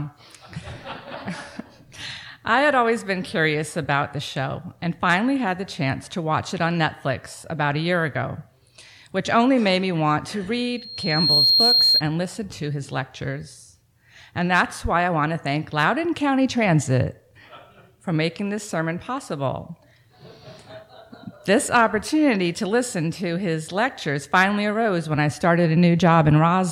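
A microphone picked up the loudspeaker it was feeding, and around 4.2 kHz the loop gain rose above one, producing loudspeaker feedback squeal from 10.77 to 12.02 s. A thin, piercing tone at that frequency swells over roughly half a second until it sits a few decibels above the rest of the audio. It then holds as a steady whistle across the remaining second or so before it stops.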